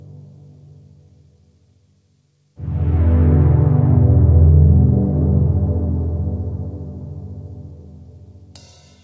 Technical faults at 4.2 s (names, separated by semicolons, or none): none